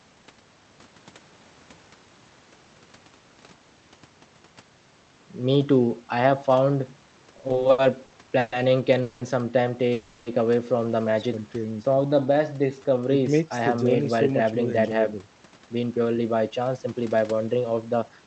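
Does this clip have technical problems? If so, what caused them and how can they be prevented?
Yes. Five network-timing faults occur in the speech, all after about 7 seconds.

Repeated stalls (stutter), 7.33 to 8.53 s: packets kept arriving late or slower than real time, so the jitter buffer ran dry eleven times. Each time the receiver stretched out the last sound, fading it in the longer waits, with the longest gap 130 ms. These fills total 350 ms, about 29% of that stretch, so nothing is lost but the speech drags and stutters. A larger, adaptive jitter buffer and a steadier network path with less congestion would prevent this.

Call audio freeze, 9.02 to 9.22 s and 9.93 to 10.27 s: the sound hangs on as a fading buzz or hiss for 190 ms and then 330 ms, with no silence, before resuming exactly where it stopped. The likely cause is packets held up in transit, leaving the buffer empty until they arrived. 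Each hold adds the same amount of delay, so a gap is inserted but nothing is missing. Reducing route congestion and prioritising the call's traffic would prevent these holds.

Jitter buffer slow-down, 11.41 to 13.01 s: to rebuild its reserve, the buffer repeated single pitch periods and fragments of pauses over and over. That inserts 208 ms, so the speech plays at about 87% speed at unchanged pitch, with drawn-out sounds. Keeping packet arrival steady, so the buffer rarely runs low or has to raise its target delay, would avoid this.

Jitter buffer speed-up, 14.53 to 18.26 s: the buffer held more audio than it aims for, so the receiver cut out short pitch-period pieces repeatedly, removing about 0.4 s in total. The speech runs at about 110% speed at the same pitch and sounds hurried. Smoother delivery, without packets bunching after a delay, would remove the need for this catch-up.

Through all of this the Opus call codec limits the audio to 8 kHz bandwidth, which fits a rate around 32 kbps.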